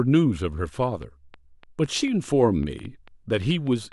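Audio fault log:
0.84 s to end (3.93 s): train of clicks. About five clicks per second tick across the speech at an uneven pace, roughly fifteen in all, each much the same short shape and peaking at about the level of the speech itself, so they pop out clearly in pauses as well. The likely source is electrical interference or a faulty connection or power supply injecting pulses. A spectrogram shows thin broadband vertical lines at irregular spacing. The waveform shows sharp isolated spikes.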